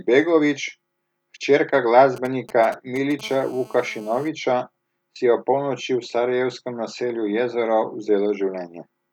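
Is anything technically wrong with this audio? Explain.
Yes, there's a 2G mobile phone interfering with this speech recording, in two stages.

From 2.16 to 3.21 s you get GSM signalling bursts: a galloping dit-dit-dit of short buzzes at 217 Hz, roughly 15 dB under the speech. A phone nearby was sending short groups of radio pulses while setting up a connection. The audio circuitry rectified that RF energy, so each group comes through as a brief buzz.

Then from 3.23 to 4.28 s it turns into a steady GSM phone buzz: a hard, raspy 217 Hz tone full of harmonics, sitting about 25 dB below the speech and unrelated to it. That's the phone in an active call, transmitting bursts continuously 217 times a second. Once rectified, that pulse train becomes a constant buzz at the burst rate.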